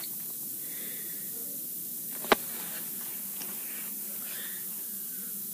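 A steady, thin hiss sits over the sound for its whole length and rises sharply toward the top of the band. This is low bit depth with noise shaping: the rounding error, which fits a 6-bit quantiser, is pushed upward, leaving noise about 10 dB above the signal.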